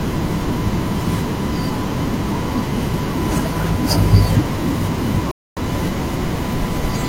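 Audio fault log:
5.31–5.61 s: digital broadcast dropout. The speech cuts to silence for about 0.3 s and resumes further along, with 256 ms of programme missing. This fits a handful of corrupt frames that the receiver muted until valid frames arrived again.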